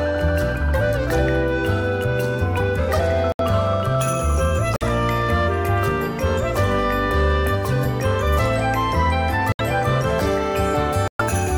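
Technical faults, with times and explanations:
3.32 to 11.21 s, corrupt frame muted: the sound drops abruptly to silence four times, at 3.32 s for 86 ms, 4.76 s for 64 ms, 9.52 s for 88 ms and 11.08 s for 135 ms. Damaged compressed frames failed decoding and the player substituted silence. Each gap's length points to between two and five lost frames. Because the silence replaces the frames rather than skipping them, the material after each hole stays in time.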